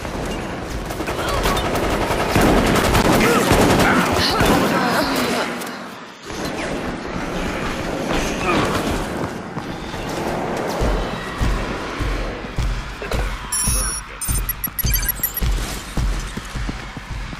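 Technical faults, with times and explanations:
2.70 to 3.23 s, loose connector crackle: an irregular half-second burst of scratchy crackle as a worn contact rapidly breaks and remakes, chopping the signal.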